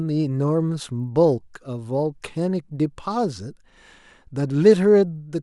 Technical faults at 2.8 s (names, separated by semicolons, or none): resampler restarted on every block